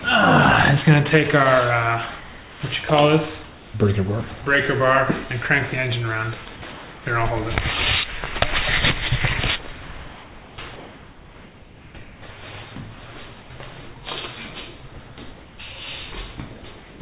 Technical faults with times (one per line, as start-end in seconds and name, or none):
2.20-2.62 comfort noise in place of the background
3.44-3.74 comfort noise in place of the background
6.72-7.06 comfort noise in place of the background
9.72-12.22 comfort noise in place of the background
13.42-13.50 comfort noise in place of the background
16.78-17.00 comfort noise in place of the background